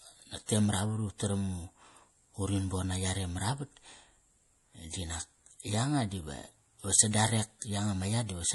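Throughout the speech, MP3 compression is the likely cause of the damage: nothing sounds above 11.5 kHz, consistent with a low bitrate near 48 kbps, and weak detail flickers frame to frame, giving a watery swirl on s sounds that a plain low-pass filter would not add.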